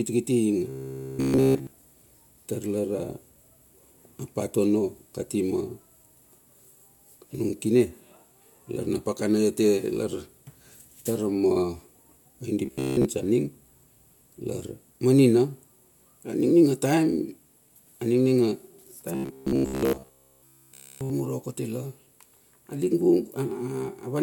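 Speech with robotic sound from repeated short buffers at 0.70–1.73 s, 12.66–13.05 s and 19.15–21.10 s. The voice becomes a rigid metallic buzz at 66.8 Hz, entirely so in the first and last spans and mostly in the middle one. The likely cause is a roughly 15 ms chunk being replayed while fresh audio is skipped. The waveform shows identical cycles repeating every 15 ms, and the spectrogram shows evenly spaced horizontal harmonics at multiples of 66.8 Hz.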